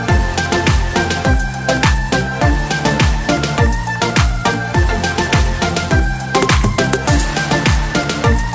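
The audio arrives through a call path with no technical faults, and its content stops at about 8 kHz, which fits a wideband call codec such as G.722 at 64 kbps.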